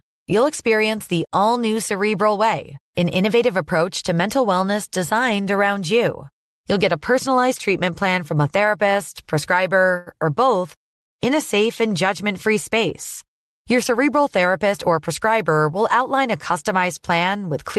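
Speech, with a short stall from a late packet around 9.97 to 10.08 s: the jitter buffer ran dry, so the sound gets held for about 90 ms before carrying on without losing anything.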